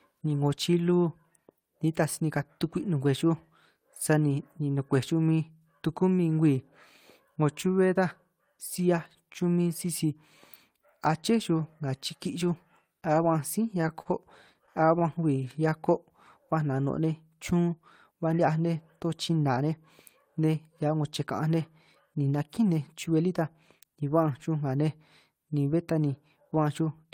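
At 14.02 to 14.08 s, a late packet left the jitter buffer empty, causing a short stall from a late packet. The receiver held the last sound for 36 ms until the packet arrived and then resumed where it left off, so nothing is lost, but one sound hangs on slightly too long.

From 14.53 to 15.04 s, packets kept arriving late and the buffer ran dry four times, producing repeated stalls (a stutter). The receiver stretched the sound each time, the longest gap being 17 ms, filling 52 ms in all, about a tenth of that half-second. The speech drags and catches.

From 15.44 to 15.91 s, a jitter buffer slow-down built up a reserve by repeating single pitch periods or bits of pauses, adding 45 ms. The speech plays at 92% speed with unchanged pitch, so sounds are drawn out.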